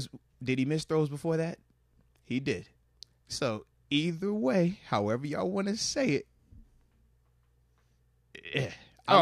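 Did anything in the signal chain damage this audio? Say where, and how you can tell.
No, there's no audible damage at any stage of the chain, from wiring and conversion through to storage and playback.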